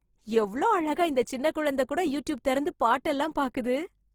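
Throughout, the speech is grainy and rough but swirls less than MP3 would. That fits likely Opus compression in CELT mode, at a low bitrate near 16 kbps.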